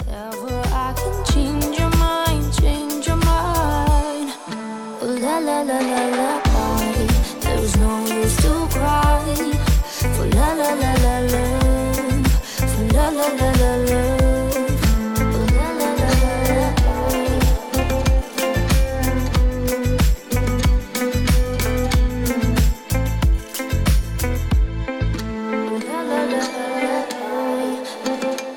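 No technical faults are audible.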